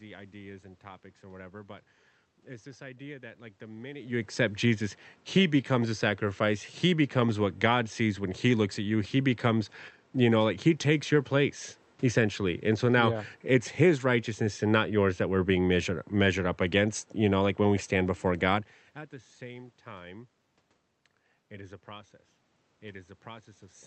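No technical faults occur.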